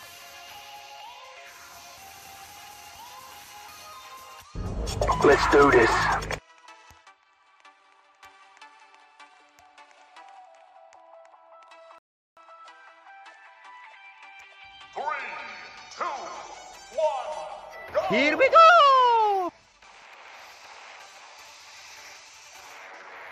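At 11.98 s the player ran out of downloaded audio and had to wait for more, a rebuffering stall. The sound drops to silence until 12.37 s, then picks up exactly where it stopped, so nothing is skipped but about 0.38 s is added.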